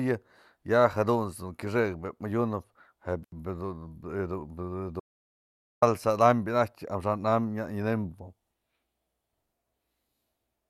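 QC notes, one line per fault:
3.23–3.32 s, intermittent contact: the speech cuts out for about 76 ms, with crackle at both edges as the connection breaks and remakes. This is a loose cable or plug momentarily opening the signal path. Because the conductor scrapes across the contact rather than switching cleanly, each transition produces brief broadband clicks instead of a smooth fade.
5.00–5.82 s, audio dropout to silence: the speech stops mid-flow and is replaced by about 0.83 s of silence, with no room tone or noise floor left underneath, before cutting straight back in. This pattern likely comes from the input being lost, whether through a disconnected device, a failed link or an accidental mute, while the recorder kept writing silence. Whatever was said during that stretch is unrecoverable.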